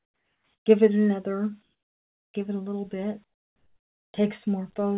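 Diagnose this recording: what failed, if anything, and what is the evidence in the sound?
Call processing likely switched to discontinuous transmission during the pauses, so the receiver synthesised comfort noise in place of the background. From 0.0 to 0.66 s, 1.62 to 2.34 s and 3.24 to 4.14 s, the real background, which sits about 44 dB below the loudest sound, gives way to a smooth, featureless hiss. That hiss is about 10, 13 and 10 dB quieter, respectively, and stays within the call path's 4 kHz band.

The onset was clipped by the voice detector, which was likely slow to register returning sound at 4.12 s. About 20 ms of the start was never sent, and comfort noise filled that gap. The sound then appears abruptly, without its natural soft attack.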